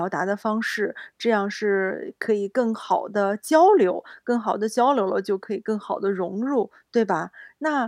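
Listening to the speech recording turned up nothing that stood out as a technical problem.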